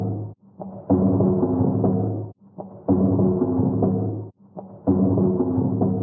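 A speech-tuned noise suppressor stays active across these sounds, treating steady, sustained content as noise, so the level pumps and thins with swings of around 10 dB. Sound cut by the noise suppressor occurs at 0.27 to 0.89 s, 2.26 to 2.88 s and 4.22 to 4.88 s, where held portions sink by up to about 11 dB for roughly half a second, half a second and 0.7 s. The call microphone processing band-limits the audio, leaving nothing above 8 kHz.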